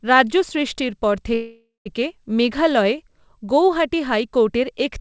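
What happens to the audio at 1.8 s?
At 1.8 s the clip is inside a call audio freeze running from 1.34 to 1.88 s. The last sound is stretched into a fading buzz or hiss, with about 0.15 s of silence at the end, before the speech resumes exactly where it stopped. The likely cause is delayed packets draining the jitter buffer, which inserts roughly half a second of gap without losing any content.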